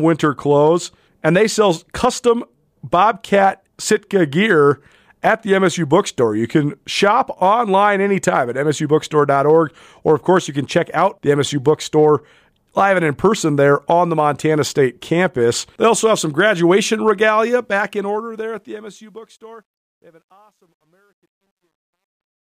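From 17.5 s, just after "also have some graduation", the fade-out to 22.58 s shows truncation distortion on a fade: the quiet tail grows gritty, worst from 19.61 to 22.59 s. Undithered requantisation, fitting an 11-bit path, turns the waveform into square steps, with broadband hash on a spectrogram.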